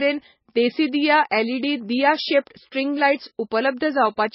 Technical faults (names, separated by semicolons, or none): MP3 compression